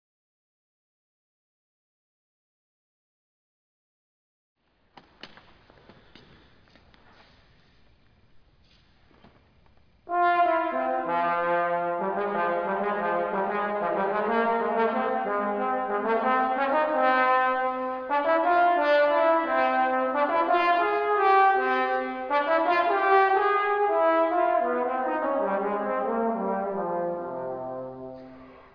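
No technical faults can be heard anywhere in it.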